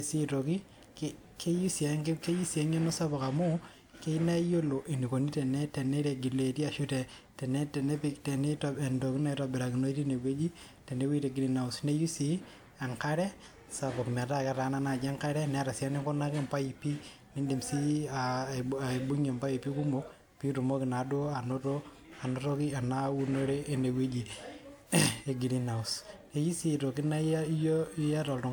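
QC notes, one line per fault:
Throughout: generation loss. The speech has that swirly, hollow smear, with consonant attacks going soft, which is more damage than a single encode at a decent rate would leave. It sounds like it was likely run through a lossy codec about three times, each pass landing on a new frame grid so the quantisation noise piles up. The texture fits WMA at around 128 kbit/s, and the top end still reaches about 20.1 kHz.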